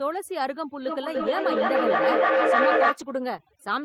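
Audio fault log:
Throughout: overdone noise removal. Background drops and breaks up into twinkling specks, unlike a gate, which cuts the whole signal rather than single bands.
0.86 to 3.03 s: feedback howl. A tone near 500 Hz grows to about 7 dB above the speech, with repeats roughly every 300 ms, because the mic-to-loudspeaker loop gains level each trip.
1.15 to 1.33 s and 2.17 s: lost packet rebuilt from error correction. About 100 ms and 20 ms turn rough and noisy, filled from a low-bitrate copy of the lost audio, so there is no dropout gap.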